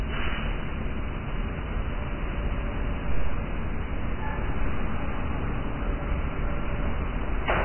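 Throughout, the sound is dull and grainy, likely heavy Vorbis compression at a very low bitrate; a spectrogram shows nothing above 3 kHz.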